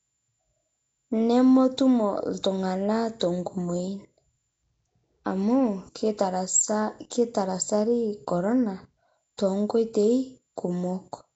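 From start to finish the speech carries a rough, hissy halo and a smeared, underwater colour, and nothing is heard above about 7.7 kHz. This is most likely Nellymoser compression: blocks of audio are coded with a fixed, tiny bit budget, and weak bands are replaced with noise, which fits a rate around 32 kbps. Unlike plain low-pass filtering or MP3 swirl, the damage is a grainy noise fill riding on every sound.

At 7.10 s and again at 9.37 s, a sharp attack is preceded by about 14 ms of hiss, and the onset itself sounds softened. This is pre-echo. The codec spreads the quantisation noise meant for the loud attack across the whole block, so it also fills the quiet moment just before it. What sets it apart from a click or a dropout is that the hiss comes before the onset.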